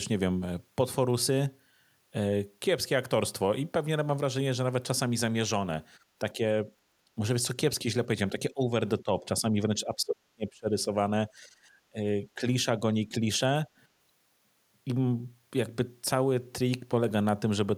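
Speech suppressed in double talk occurs at 6.33–6.71, 7.15–7.21, 8.32–10.94, 11.37–11.5 and 11.9–13.25 s. The speech dips or breaks into fragments, worst in the 8.32–10.94 s stretch at roughly 30 dB down. The likely cause is an echo canceller treating overlapping talk as echo and suppressing both.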